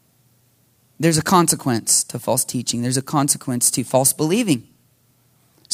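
A speech recording with nothing technically wrong with it.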